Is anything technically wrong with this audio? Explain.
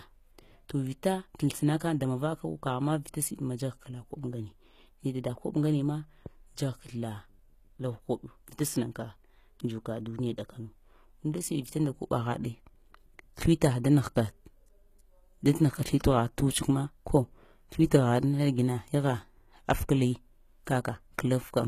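Yes. Throughout the speech there is plainly audible codec damage, most likely HE-AAC compression at a low bitrate, with the sound pointing to something around 20 kbps. The core codec carries only the lower spectrum, and the treble is synthesised by copying lower bands upward under a coarse envelope. The upper harmonics therefore fail to line up with those below the crossover, so sibilants come out gritty and metallic or lispy, and nothing is present above 14.9 kHz.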